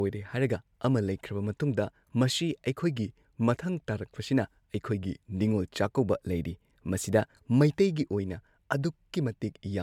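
Generation loss runs throughout the speech, likely from repeated MP3 re-encoding, perhaps five passes at around 140 kbit/s. Each pass quantises again on a shifted frame grid, so noise and spectral gaps pile up, leaving a swirly, hollow, smeared sound with softened consonant attacks.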